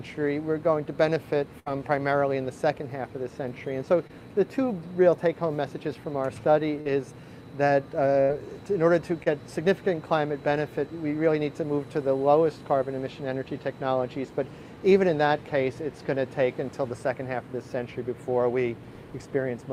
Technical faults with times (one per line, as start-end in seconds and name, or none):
1.59-1.70 burst of packet loss
4.07-4.11 short concealed packet loss
6.81-6.87 short concealed packet loss
8.21-8.31 burst of packet loss
9.23-9.30 short concealed packet loss